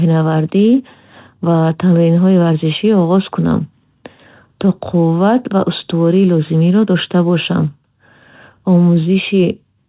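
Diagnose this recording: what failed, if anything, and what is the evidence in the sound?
Nothing failed; the speech passes through intact.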